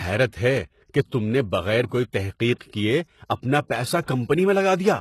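From start to end, the speech carries plainly audible HE-AAC compression damage. The likely cause is a low bitrate, which fits 16 kbps. Above the crossover the treble is rebuilt from copied lower bands, so s sounds come out gritty and metallic. On a spectrogram those upper bands look smeared and repeated, with nothing above 12.3 kHz.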